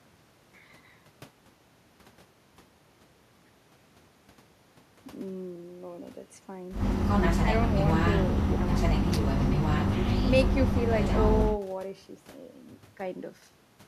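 Nothing in the speech stood out as a technical fault on listening.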